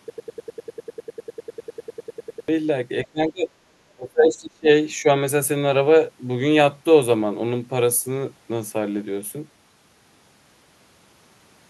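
From the very start until 2.48 s, a broken-record loop is already under way. The player, encoder or stream has likely stalled and keeps resending the last fragment it held, a piece about 100 ms long that repeats exactly, back to back, two dozen times. The result is a rapid, mechanical stutter with no forward progress, and whatever speech belonged in those two and a half seconds is simply gone.

Next comes speech suppressed in double talk, likely from an echo canceller that could not tell the near talker from the loudspeaker echo while both sides spoke, and so turned everything down. From 3.06 to 3.49 s the voice sinks by about 25 dB. From 3.92 to 4.68 s it drops deeper, by about 30 dB. A brief, slight dip of about 5 dB follows at 5.02 to 5.08 s.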